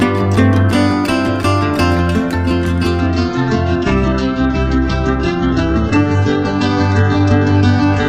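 An adaptive stream at a lower bitrate takes over at about 3.00 s and holds to the end of the audio. The quality drops abruptly with no gap or dropout. From that point nothing is left above 8 kHz, so the top end goes dull, and coding artefacts rise. That sound fits a player switching from a roughly 96 kbit/s AAC rendition to a very lean HE-AAC stream near 8 kbit/s after the connection slowed.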